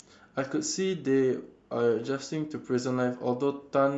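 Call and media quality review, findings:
Grainy, breathy edge on speech throughout. Likely Bluetooth LC3 compression, with upper-band detail quantised coarsely and filled with synthetic noise. This fits roughly 48 kbps and 7.5 ms frames. It differs from plain low-pass filtering because the top end is present but hissy.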